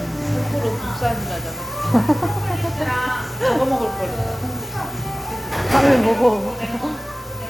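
A recording of everyday sounds with compressed frames skipped twice. At 4.89 s the audio jumps ahead by roughly one frame, about 30 ms, and at 7.11 s by roughly two frames, about 50 ms. The jump lengths fit a 26.1 ms codec frame. Unlike a dropout, no gap of silence appears.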